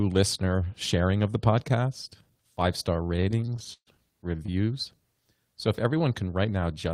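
Repeated stalls (stutter) run from 2.93 to 3.89 s, just after "of the podcast five". Packets arrived more slowly than playback, so the jitter buffer kept emptying. Fifteen gaps were bridged by extending the speech, about 295 ms in all and the longest 136 ms, so nearly a third of the passage drags and stutters, though nothing is lost.

A short stall from a late packet follows at 4.46 to 4.50 s. One packet missed its slot, and the receiver held the preceding sound for about 19 ms until the packet arrived, then resumed. The speech catches briefly, with a slight buzz or dip, and none of it is skipped.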